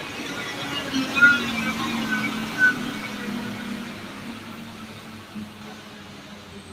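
No technical faults are audible anywhere in this recording.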